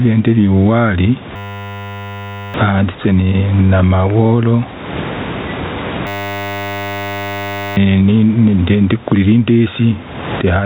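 Gain pumping runs through the whole clip. The input gain is likely set far too high for the microphone, so a fast limiter or compressor clamps down on every loud syllable and lets go in the pauses. The level swings by roughly 20 dB. The room noise sits about 29 dB under the speech. The speech sounds squashed.

A system hang loop starts at 1.36 s, right after "ndiri uwari", and lasts until 2.54 s. It returns from 6.07 s to 7.77 s. Each time the machine stalls, the audio hardware keeps replaying the same 10 ms stretch of its ring buffer. That tiny loop repeats at 100 Hz and comes out as a steady buzz, not a stutter. Roughly a second of speech is lost in the first hang and about one and a half seconds in the second. The buzz, like everything else, is capped at 4 kHz by the narrowband phone-style call path.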